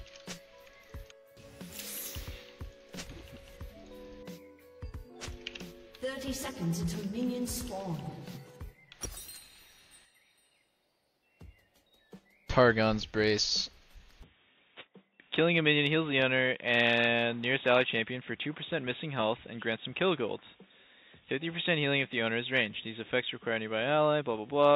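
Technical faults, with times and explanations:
14.23–24.76 s, input switched to a poorer device: the sound abruptly turns dull and boxy with nothing above 3.8 kHz, drops a few decibels and gains a faint new background noise, with no gap. The input likely moved to a narrower-band microphone or headset.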